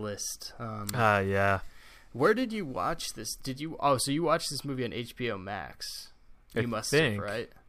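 From 0.85 to 2.93 s the speech shows crude rate conversion. Samples appear dropped without filtering, consistent with a 48 kHz to 44.1 kHz change, leaving an inharmonic gritty fizz around 30 dB below the speech that tracks louder, brighter syllables.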